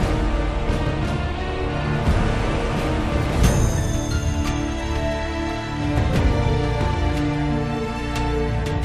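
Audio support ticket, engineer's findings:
No fault found on listening; nothing audible to attribute to any component, no action required.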